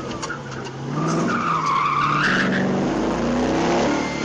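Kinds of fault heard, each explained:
Damaged data in a compressed stream: at about 2.23 to 2.25 s there's a brief glitch lasting around 20 ms, where part of the encoded data the decoder was reading came through wrong. Faced with bytes it can't make sense of, the decoder either misreads that stretch or gives up on it and hunts for the next valid frame header before carrying on, so you get a short disruption right there.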